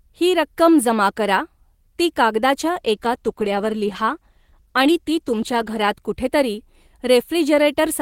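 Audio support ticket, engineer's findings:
Call bitrate drop, 2.64 to 6.01 s. Speech turns rough and watery, then clears. Probable component: encoder rate control following a falling bandwidth estimate. Sound fits roughly halving the rate, 32 to 16 kbps, held about 3.3 s, so coarser coding.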